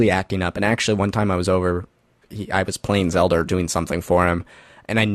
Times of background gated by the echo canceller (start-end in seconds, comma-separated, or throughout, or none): none